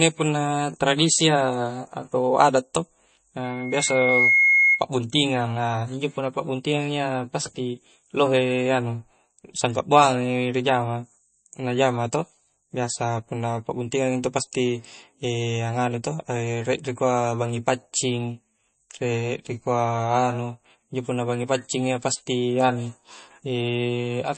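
MP3 compression, likely, runs throughout: the speech sounds plainly watery, with nothing above 8.3 kHz, which fits a low bitrate near 32 kbps starving weak frequency lines.

Loudspeaker feedback squeal, 3.44 to 4.84 s: a microphone re-amplified its own loudspeaker, so a 2.2 kHz tone swelled over roughly 0.7 s to around 5 dB above the speech.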